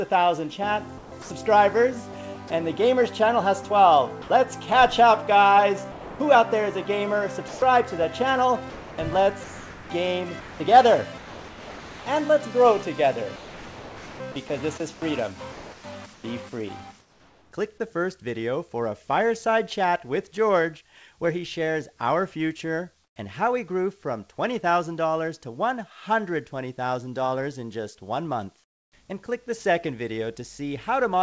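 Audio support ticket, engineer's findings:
Sound chopped by the voice detector, 0.98–2.50 s and 5.92–17.52 s. Short segments swapped for flat synthetic noise, about 0.24 s in the first stretch and about 4.2 s across the second. Likely sender VAD toggling transmission on quiet material.

Sound dropped by the voice detector, 4.22–4.30 s. 80 ms of sound gone, steady noise in its place until transmission resumes. Likely the sender's VAD misread the passage as background and stopped sending; the receiver filled the gap with comfort noise.

Comfort noise in place of the background, 23.04–23.16 s and 28.64–28.92 s. Background, already about 46–47 dB under the loud parts, turns featureless and drops about 10 dB, then about 18 dB. Likely DTX pause filled by synthetic noise. Call codec path: nothing above 8 kHz.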